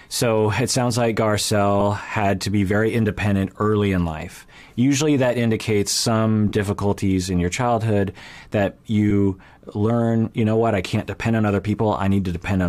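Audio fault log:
1.80 s, 6.48–6.52 s and 9.10 s: lost LE Audio frames. Each is a brief grainy smear; the middle one lasts about 30 ms, which fits four 7.5 ms frames. The LC3 decoder patched each gap by reusing the last spectrum with random signs, blurring any tone.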